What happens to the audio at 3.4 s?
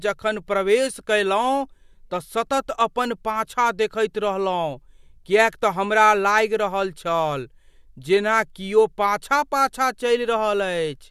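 Nothing goes wrong at 3.4 s: the speech there runs on intact, with no dropout, click, distortion or other fault.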